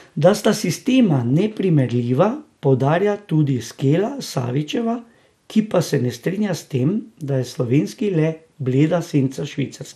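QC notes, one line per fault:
throughout: MP2 compression. The sound is dull and muffled, with a gurgling, granular edge. The likely cause is MPEG Layer II coding at a rate that fits around 80 kbps, too little to keep all 32 sub-bands active. Upper bands get switched off and the remaining ones are coarsely quantised. On a spectrogram the top end is cut off in blocky steps, with high-frequency energy flickering on and off frame by frame.
1.16 to 1.30 s: DAB burbling. For about 0.14 s short blips of noise sit over the speech. Bit errors that slipped past error correction corrupted samples in the MP2 data, so individual sub-bands carry short blips of noise. The extent of the damage points to a dozen or so hit frames, which fits an error rate of a few tenths of a percent. On a spectrogram this shows as isolated bright rectangular patches in separate bands, and the waveform has brief, uneven bursts.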